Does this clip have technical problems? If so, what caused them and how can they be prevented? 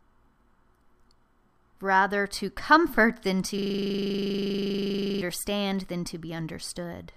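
Yes. A system hang loop occurs from 3.58 to 5.21 s, just after "to comfort than to". The computer or audio driver stalled while the sound hardware kept replaying the same 40 ms stretch of its ring buffer. That one fragment repeats exactly, about 40 times, at 25 Hz, producing a rough, rattling buzz in place of the speech. Preventing it means keeping the audio thread responsive, with stable drivers and a watchdog that mutes output when buffers stop refilling.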